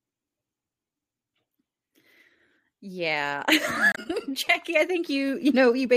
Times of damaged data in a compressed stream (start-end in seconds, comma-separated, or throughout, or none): 3.91-3.98